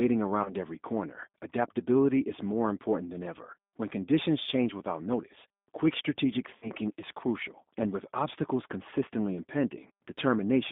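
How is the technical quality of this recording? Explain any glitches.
Quality's fairly rough: it's speech squeezed through a G.729 codec the whole way, with two packet-loss glitches on top.

The G.729 codec sound is plainly audible throughout. Band-limited to roughly 200 Hz–3.6 kHz, with the grainy, synthetic edge of a model-based coder, which fits 8 kbit/s G.729A.

The VoIP packet loss concealed by the speech codec hits at 0.43–0.54 s, just before "every corner adaptability is", and 6.58–6.72 s, between "without notice quick strategic" and "is crucial". About 20 ms and 40 ms went missing. The decoder stretched the last sound into a fading tone or noise, and the voice takes tens of milliseconds or more to recover afterwards.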